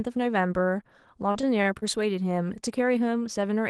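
From 1.31 to 1.84 s, repeated packet loss makes the speech choppy and robotic. Gaps up to 33 ms are filled with repeated sound, appearing as smeared, stuttering spectrogram blocks.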